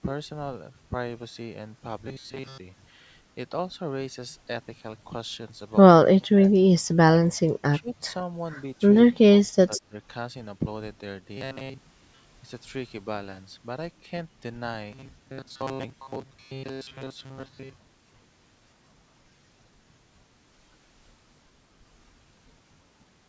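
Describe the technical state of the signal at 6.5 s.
At 6.5 s the speech sits at the tail of a deep dip, about 35 dB down, spanning 6.04 to 6.53 s, likely speech suppressed in double talk as the echo canceller ducked its own talker along with the loudspeaker echo.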